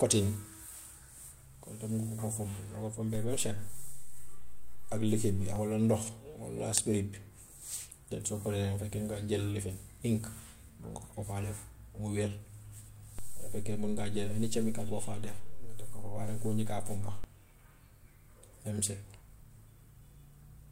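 DC steps occur at 3.15 s, returning at 5.56 s, and again from 13.19 s to 17.24 s. The waveform's zero line jumps by about -32 dBFS, then about -30 dBFS, holds, and drops back. Each shift lands as a low thump beneath the continuing speech.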